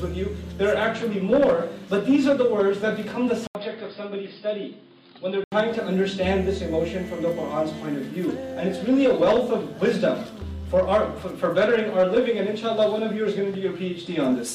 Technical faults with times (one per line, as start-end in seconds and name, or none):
3.47-5.52 input switched to a poorer device